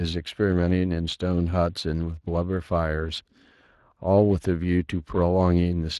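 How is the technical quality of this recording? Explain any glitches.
The technical quality is compromised by one fault that runs through the whole speech clip. Speex codec damage is plainly audible from start to finish. This CELP codec models the voice with a predictive filter and a coded excitation signal. The excitation gets too few bits here, which fits a bitrate in the low twenties of kbps, so the speech takes on a hoarse, grainy, noisy texture.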